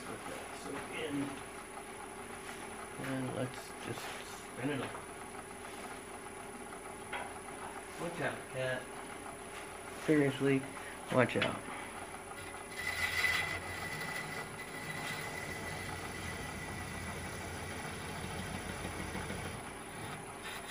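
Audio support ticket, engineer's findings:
No audible faults found.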